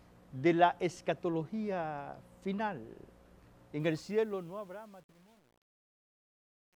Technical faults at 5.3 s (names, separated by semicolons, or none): truncation distortion on a fade